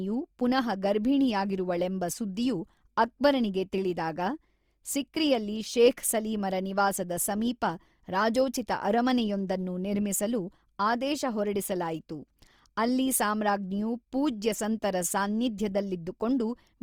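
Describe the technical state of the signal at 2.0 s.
At 2.0 s the speech carries grainy, rough coarseness that runs the whole clip, likely Opus compression in CELT mode filling starved bands with noise, consistent with about 24 kbps.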